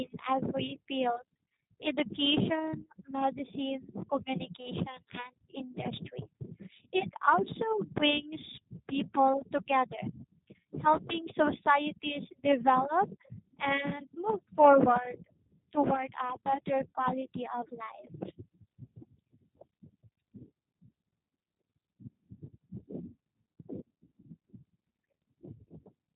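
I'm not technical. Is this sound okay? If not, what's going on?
No, not quite. This is speech squeezed through the G.729 codec, a phone-call compressor that rebuilds the voice from a rough model instead of storing the real sound. Everything above about 3.8 kHz is gone, so the whole clip sounds muffled and boxed in, like a cheap phone line. The squeezing is plainly audible too, giving voices a slightly rough, buzzy, synthetic edge from start to finish.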